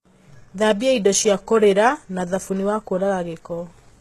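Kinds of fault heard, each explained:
HE-AAC compression: throughout the speech, s sounds come out gritty and metallic, likely from HE-AAC at a rate that fits about 16 kbps, with treble rebuilt from copied lower bands. A spectrogram shows smeared, repeated upper bands cutting off sharply near 12.3 kHz.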